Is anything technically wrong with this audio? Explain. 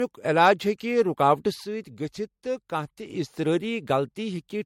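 Yes, there are two faults in this speech. Throughout, the sound is swirly, smeared and hollow, with nothing above 16.6 kHz. This is likely generation loss from repeated 64 kbit/s MP3 re-encoding, about three passes. From 1.64 to 3.10 s, the level drops abruptly by about 6 dB, then returns. One channel likely drops out there, halving the mono sum.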